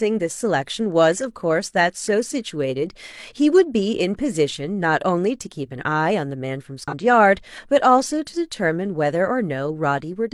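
At about 6.88 s the speech gets hit by a short burst of damaged data in the compressed stream, running to roughly 6.94 s, so around 60 ms. A stretch of the encoded bytes there was corrupted, and the decoder couldn't make sense of those frames. It lost sync and had to hunt for the next valid frame header before it could carry on. What you hear is a quick glitch cutting into the speech.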